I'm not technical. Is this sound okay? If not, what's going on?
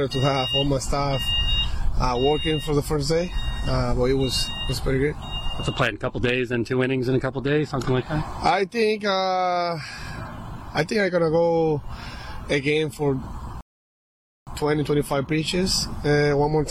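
No, there is one problem: a rebuffering stall from 13.61 to 14.47 seconds. The sound abruptly drops to silence for a bit under a second, then picks up exactly where it left off. The player ran out of downloaded audio and had to pause until more arrived. Nothing is skipped or lost; the clip just gains about 0.86 seconds of dead air near the end.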